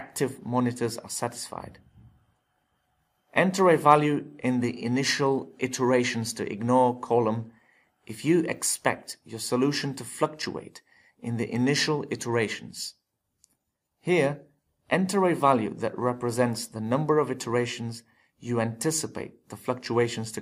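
No audible technical faults found.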